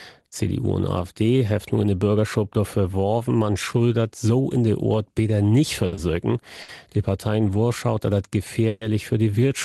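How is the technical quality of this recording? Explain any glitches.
The recording has clear call-transport glitches: three short stalls and one brief freeze. It passed through a call codec, and its high end stops near 12 kHz, which fits Opus at a modest bitrate.

Short stalls from a late packet occur at 5.87 to 5.95 s, 5.95 to 6.00 s, and 6.62 to 6.71 s. Packets arrived late and the jitter buffer ran dry. The receiver stretched the last sound by 60, 30 and 70 ms. Each is heard as a brief held sound with a slight buzz or dip.

A call audio freeze runs from 8.68 to 8.83 s. The sound hangs for 130 ms as a fading buzz or hiss, never reaching silence. Then it resumes exactly where it stopped. The likely cause is packets held up in transit, emptying the jitter buffer.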